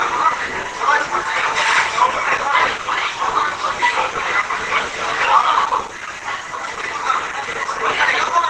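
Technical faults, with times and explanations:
Throughout, Opus compression: the encoder was likely starved of bits, which fits a rate near 16 kbps, and fell back to its hybrid speech mode. Nothing is left above 12 kHz, so the sound is dulled, muffled and hoarse, with plainly audible grainy roughness.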